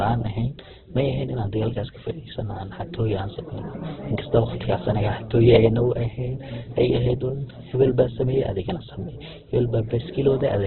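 Throughout, likely Opus compression at a bitrate near 8 kbps narrows the band, leaving nothing above 4.2 kHz; the speech turns dull, rough and grainy.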